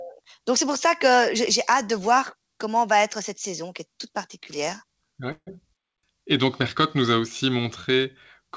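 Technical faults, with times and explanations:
5.32 to 5.49 s, call audio freeze: the speech stops and the last sound is stretched into a fading buzz, ending in about 60 ms of silence. Likely the jitter buffer ran dry while packets were delayed. Nothing is lost, and everything after arrives about 150 ms later.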